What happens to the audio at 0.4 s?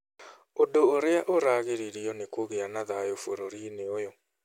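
Nothing goes wrong at 0.4 s; the speech carries on intact through that moment, with no dropout, click or other disturbance.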